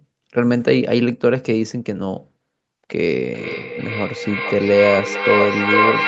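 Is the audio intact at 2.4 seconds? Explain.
Yes, the speech is intact at 2.4 seconds, with no fault at that moment.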